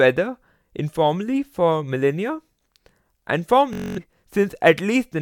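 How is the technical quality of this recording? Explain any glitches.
One glitch stands out in this speech recording. A Bluetooth stutter runs from 3.73 to 3.98 s. The wireless link dropped or delayed its packets, so the receiver kept replaying its last short slice of buffered audio, which produces a rapid machine-gun buzz. When the speech resumes, roughly a quarter-second of it has been skipped.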